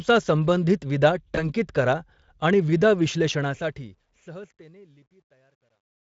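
At 1.35 s, right after "संबंधित विदा", VoIP packet loss concealed by the speech codec breaks the speech for about 0.09 s. The decoder bridges a gap the size of a single lost 20 ms frame by extending its last pitch and filter state at falling gain, and the speech is briefly buzzy and thin until "करा आणि विदा" resumes at 1.44 s. A spectrogram shows smeared, overly regular harmonics in that stretch. The waveform shows a repetitive, decaying section.

From 3.33 s, right after "करा आणि विदा", the fade-out that runs to the end at 6.11 s carries truncation distortion on a fade. The fade stage drops low bits without dither, which fits about an 11-bit word length. As the level sinks it turns gritty, and it is at its worst from 4.45 s to 6.11 s. Zoomed in, the waveform is coarse square steps. A spectrogram shows broadband specks in place of a clean decay.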